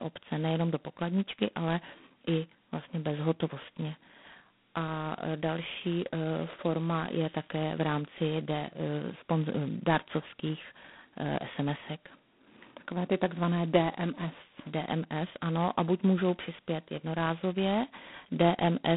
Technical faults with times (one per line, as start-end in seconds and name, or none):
0.00-18.96 G.726 ADPCM